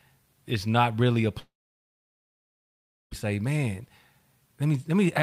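At 1.39 s the speech breaks off. The last sound smears into a short fading buzz, then gives way to about 1.6 s of silence before the speech resumes at 3.13 s, partway along, with roughly 1.7 s of material simply gone. This is a long network dropout. The likely cause is that no packets reached the receiver for that stretch, so it extended the final sound briefly, then fell silent until the stream returned.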